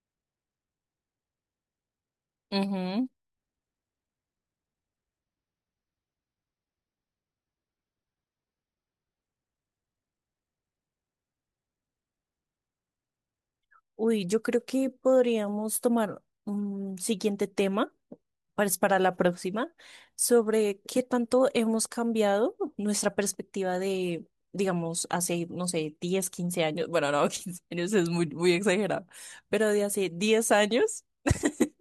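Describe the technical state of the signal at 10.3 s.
At 10.3 s the signal is intact, with no audible fault at that moment.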